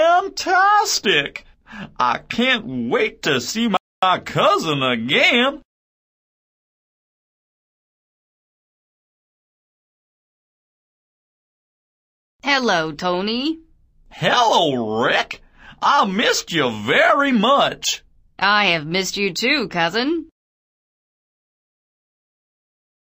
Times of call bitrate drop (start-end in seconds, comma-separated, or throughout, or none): none